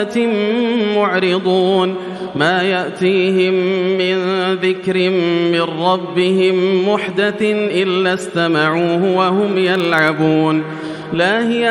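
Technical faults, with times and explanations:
9.43–10.25 s, filter restarted on every block: a level-following buzz at 21.5 Hz, each tick a transient as the filter restarts from silence, fitting 2048-sample blocks.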